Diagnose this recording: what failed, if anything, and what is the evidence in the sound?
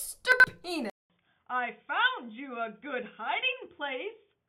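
Chunks out of order, at the buffer stage: between 0.32 and 0.44 s a 40 ms chunk plays two chunks late. The waveform shows three hard discontinuities, heard as a jumbled moment.

Input switched to a poorer device, likely at the driver level: from 0.90 s, after a 200 ms gap, the sound drops about 5 dB and dulls. A spectrogram shows nothing above 3.6 kHz, over a faint new noise floor.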